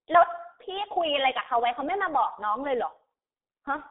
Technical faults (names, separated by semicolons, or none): G.723.1 codec